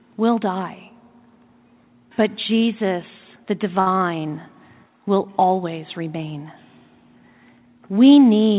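At 3.80 s, a short stall from a late packet holds the speech for 63 ms. The jitter buffer ran empty, so the receiver stretched the last sound until the packet came. Nothing is lost. The sound drags with a slight buzz or dip, and the rest runs 63 ms late.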